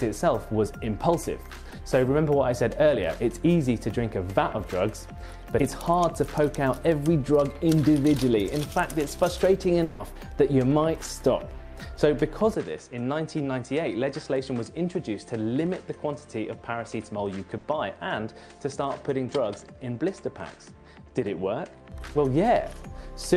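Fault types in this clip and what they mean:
short concealed packet loss: About 20 ms at 1.69 s never arrived. The receiver continued the last sound to cover it, leaving a brief smear.
long network dropout: From 9.84 to 10.02 s, about 160 ms of audio is missing. The last sound carries on and fades rather than going silent. The likely cause is a network dropout.
input switched to a poorer device: From 12.54 to 21.92 s the sound turns duller and about 5 dB quieter, with nothing above 9.7 kHz. A low noise floor sits far beneath it. This likely reflects a switch to a poorer input.
burst of packet loss: At 17.58 s, about 60 ms is lost. The receiver held and faded the last sound, then resumed with that part missing.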